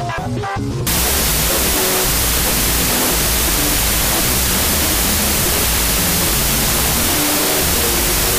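From 0.87 s to the end there's a wrong sample width fault: loud noise buries the audio, which runs at half speed, an octave low, fitting 32-bit float data read as 16-bit integers.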